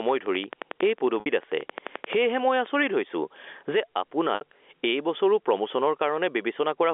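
Gain pumping runs through the whole recording: the level of the speech is squashed, with the gain swinging by something like 20 dB. The likely cause is gain set far too high, with a fast limiter or compressor pulling it down on every peak.

A train of clicks runs from 0.09 to 2.84 s: about 30 near-identical ticks at a regular 11.3 per second, peaking roughly as loud as the speech itself and audible in the gaps too. This is likely interference from nearby equipment or a faulty connection or power supply injecting pulses.

Packet loss with pitch repetition hits at 1.20 to 1.26 s and again at 4.35 to 4.41 s. Each gap lasts 60 ms, which fits two lost packets on this G.711 telephone line. The receiver bridges each gap by repeating the last pitch period and fading it out, so the speech briefly fades into silence before returning with a short cross-fade.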